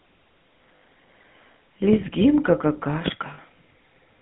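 From the first moment the speech has a buzzy, gravelly roughness and a boxed-in, telephone quality, with the plainly audible damage of the GSM full-rate codec. The band is held between about 150 Hz and 3.4 kHz. The codec rebuilds speech from a model of the vocal tract excited by a sparse, evenly spaced pulse train, which fits a 13 kbps stream, and that coarse excitation produces the grit.

At 0.79 to 0.82 s, the sound briefly freezes into a harsh, metallic ring. These are lost GSM frames. The decoder fills the hole by reusing the last good frame's settings, and the gap fits about 60 ms of missing data. The same ringing hold returns at 3.34 to 3.39 s. That loss is shorter and fits about 40 ms. Neither fault runs long enough to fade fully to silence.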